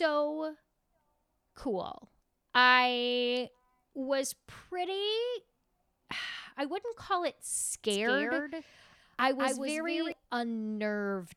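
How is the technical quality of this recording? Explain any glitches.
The recording has one clear glitch, a doubled audio track running from 7.90 s to 10.12 s. Each sound is followed by a second, full-range copy arriving around a fifth of a second later and a few decibels quieter, giving a stuttering slapback with no reverberant tail. The copy cuts in and out abruptly at those times. The likely cause is the same signal being captured twice, once through a slower path, so two out-of-step copies get mixed together.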